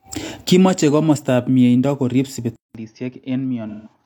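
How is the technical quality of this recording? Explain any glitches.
Two faults affect the second half of the speech.

From 2.56 s the sound changes character. A gap of about 190 ms opens, then the speech returns roughly 10 dB quieter, with nothing above 6.5 kHz and a new, faint noise floor well below the signal. It sounds duller and boxier and stays that way to the end. The likely cause is an input switched to a poorer device partway through the recording. The replacement path has a narrower bandwidth, its own level, and its own background noise.

From 3.68 to 3.93 s there is AAC frame loss with concealment. About 170 ms of coded audio went missing, which fits a run of four lost frames. The decoder filled the gap by reusing and altering the last good spectrum. The patch sounds smeared and phasey.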